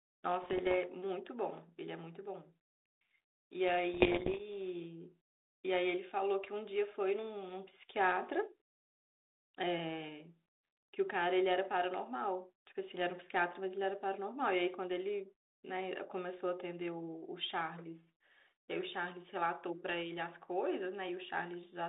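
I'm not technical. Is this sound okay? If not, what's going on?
No. The phone-style digital link carrying this speech had bit errors on an ADPCM link at two moments, from 0.42 to 0.75 s and from 3.94 to 4.41 s, with the second burst roughly twice as dense as the first. Each damaged bit throws the decoder's running guess off track, so the disturbance carries on briefly. You hear pops and rough, crackly bursts with the loudness jumping for a moment, over the narrow telephone-band sound.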